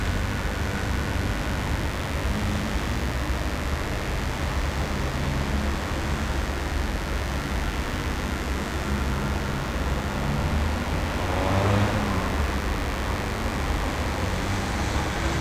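From start to finish a steady, raspy mains buzz sits under the sounds at roughly 15 dB below them. Sharp switching spikes locked to the 50 Hz supply carry harmonics into the kilohertz range, so it rasps rather than giving a plain hum's smooth low tone.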